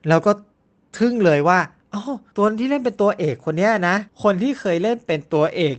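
There are no technical faults to describe in this speech, which came through a call codec path that keeps the audio band up to 8 kHz.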